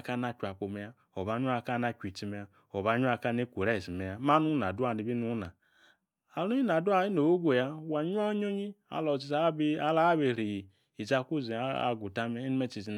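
No technical faults can be heard anywhere in the speech, and the signal stays continuous and steady from its first moment to its last.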